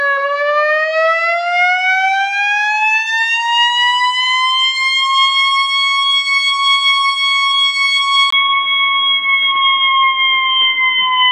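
At 8.30 s, after a brief 20 ms gap, the sounds turn dull and boxy, with nothing above 3.8 kHz, until the end. This is likely an input switched to a poorer device. Unlike a codec's bandwidth drop, it brings a fresh, faint background noise while the loudness stays about the same.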